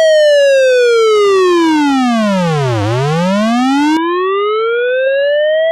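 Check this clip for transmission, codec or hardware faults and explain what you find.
One fault, at 3.97 s to the end: the input was likely switched to a poorer device. With no gap at the switch, the sound abruptly turns dull as everything above 4 kHz vanishes, the spectrogram showing a hard ceiling there. The waveform drops about 5 dB, and a new noise floor appears around 40 dB down.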